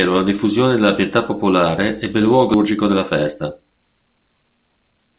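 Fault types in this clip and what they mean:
skip ahead: Right after "pietà popolare ebbe luogo" at 2.54 s, playback jumps with no gap, losing about a second of speech, dropped while later audio already waited.
jitter buffer speed-up: From 2.64 s to the end the speech runs about 115% fast at unchanged pitch, as the receiver trims short pitch-period pieces to cut excess buffered delay.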